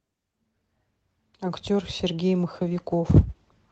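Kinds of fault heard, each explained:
Call bitrate drop: From 2.57 s to 3.69 s, the call's bitrate falls from 32 to 11 kbps and holds at its lowest for about a second. The encoder has far fewer bits to spend. The speech turns coarse and rough, with the high end dulled, until the clip ends.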